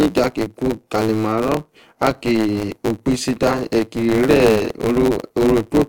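A speech recording affected by a block size mismatch, truncated type, for its whole length. A buzz sits under the sound at about 109 Hz. That is the block rate. One stage hands over longer blocks than the next stage reads. The tail of every block is discarded, leaving an abrupt splice 109 times a second. The lost material also makes the speech run about 1.09 times fast. The timbre stays the same.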